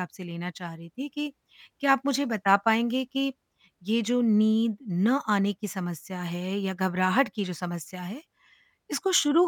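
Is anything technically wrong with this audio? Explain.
No, nothing technically wrong stood out on listening to this speech recording.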